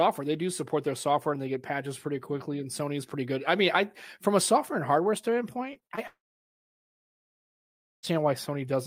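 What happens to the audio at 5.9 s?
Just after "a software and hardware", from 5.73 to 5.99 s, repeated packet loss (robotic sound) sets in. Four short holes, the longest 25 ms, are each patched by stretching the preceding sound, so about 30% of the span is concealed. Unlike a single dropout, the gaps recur in quick succession, giving a choppy stutter.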